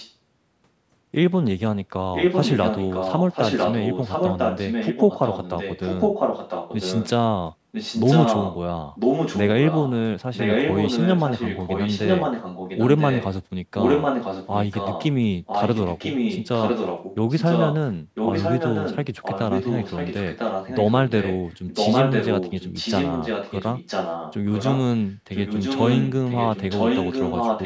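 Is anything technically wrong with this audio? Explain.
Yes. The speech carries a repeated echo leak at 0 to 0.14 s, 2.13 to 7.1 s, 7.72 to 8.57 s, 8.94 to 9.93 s, 10.34 to 13.29 s, 13.77 to 15.12 s, and from 15.46 s to the end. A copy of the speech returns one second late. It is faint at the very start, then roughly as loud as the speech itself, easing only slightly in places. The likely cause is a loudspeaker on the far side whose echo canceller let its own microphone pickup slip back into the call. The band stops at 8 kHz from the call's microphone processing.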